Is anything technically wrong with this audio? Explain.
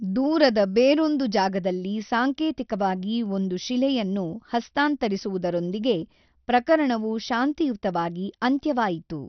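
Yes. Throughout this speech clip, nothing survives above 6.1 kHz, and a gurgling, granular roughness flickers in the upper bands. This is likely heavy MP2 compression starved of bits, consistent with roughly 48 kbps, unlike a plain low-pass filter's steady dullness.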